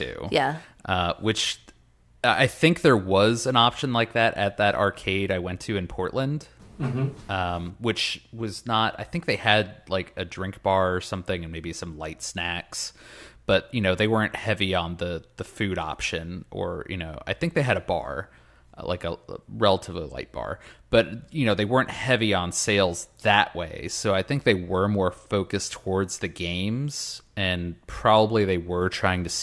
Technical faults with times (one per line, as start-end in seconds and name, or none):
none